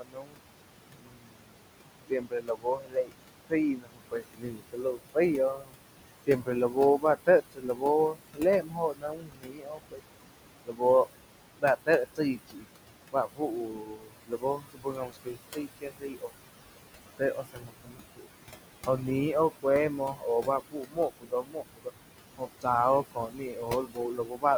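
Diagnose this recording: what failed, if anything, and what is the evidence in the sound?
Call processing: noise suppressor artifacts throughout. The room noise, about 10 dB under speech, is pumped down about 20 dB between phrases. On a spectrogram the noise floor looks blotchy and gated.

Speech cut by the noise suppressor at 0–0.39, 0.95–1.55, 2.1–5.74, 6.27–10.02, 10.65–16.47, 17.06–18.29 and 18.86–24.45 s. Sections drop by up to about 22 dB and sound swallowed. These show as carved-out gaps in the waveform envelope.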